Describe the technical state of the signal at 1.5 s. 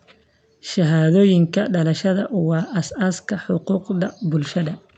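At 1.5 s the signal is intact, with no dropout, distortion, glitch or other technical fault audible in the speech at that point.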